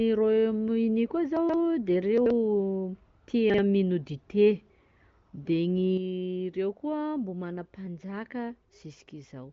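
At 1.37 to 1.54 s, 2.18 to 2.30 s and 3.50 to 3.58 s, chunks are out of order: 42.7 ms blocks play three, two and one chunk late, producing jumbled moments. At 5.97 s the level drops abruptly by about 7 dB, with noise falling alongside, and stays there to the end. This is likely a sudden gain jump applied without a ramp. The AMR wideband (HD Voice) codec band-limits the sound to about 7.4 kHz.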